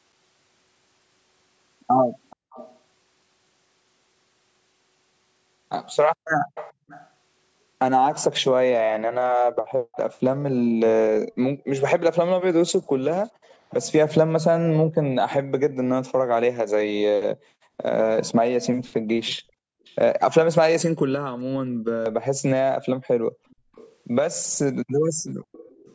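Speech over a call path, band-limited to nothing above 8 kHz as call microphone processing does, with two related problems. First, there's an echo leak: a delayed copy of the voice trails the talker by about 425 ms, heard at 2.3–2.78 s, through a long stretch from 6.55 to 15.35 s, as a faint scrap around 19.9 s, and again from 23.49 s to the end. It sits roughly 20 dB below the speech, quieter at 19.9 s, where it is about 35 dB down, and from 23.49 s, where it is about 25 dB down. The likely cause is a far-end speakerphone whose echo canceller didn't fully scrub what its mic picked up, so the leftover got sent back. Second, you can hear background gated by the echo canceller: the room sound ducks by as much as about 40 dB at 2.36–2.51 s, 6.35–6.88 s, 17.56–19.84 s and 23.21–23.71 s. Each dip lasts a fraction of a second, and in the 17.56–19.84 s window the ducking comes and goes rather than holding throughout. 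That's the canceller clamping the mic while the loudspeaker plays, then letting go.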